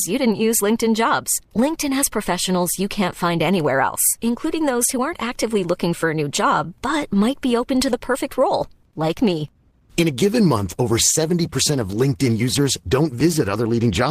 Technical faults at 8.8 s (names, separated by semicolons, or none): adaptive stream at a lower bitrate